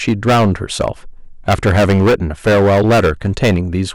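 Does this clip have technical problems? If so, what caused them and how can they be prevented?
Yes: the speech suffers hard clipping from start to finish. The signal was driven about 15 dB beyond what a stage in the chain could pass, so every peak is sliced flat and a sizeable share of samples sit pinned at the limit, giving a harsh fuzz on all louder syllables. The waveform shows flat-topped plateaus; a spectrogram shows smeared energy reaching high into the upper kHz range on each loud passage. Setting input gain lower, or adding a limiter before conversion, leaves headroom and prevents it.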